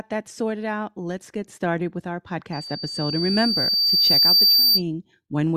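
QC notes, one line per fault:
2.53–4.82 s, loudspeaker feedback squeal: a pure 4.6 kHz tone swells over roughly two seconds to sit around 10 dB above the speech. The microphone is picking up its own loudspeaker, and at that frequency the loop gain has passed one.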